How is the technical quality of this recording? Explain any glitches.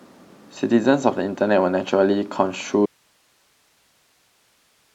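The recording has one real problem: an audio dropout to a faint residue that starts at 2.86 s and runs to the end. The speech cuts off abruptly, leaving only hiss around 40 dB below the speech level. Likely the source signal was lost while the recording chain stayed live and kept capturing its own noise floor.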